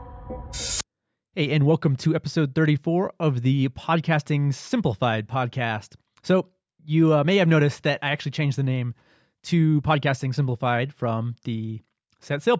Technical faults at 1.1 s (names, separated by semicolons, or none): none